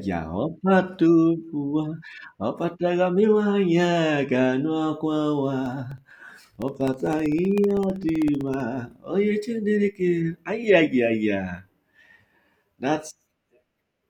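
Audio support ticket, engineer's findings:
Periodic USB or driver dropouts, 5.66 to 8.60 s. Regular ticking over the speech, one tick every 64 ms (about 15 per second), about fifty in total. Each is a gap of roughly a millisecond filled with silence. Evenly spaced, so probably a background task stalling the USB bus or audio driver on a fixed interval. Audible only while there is signal.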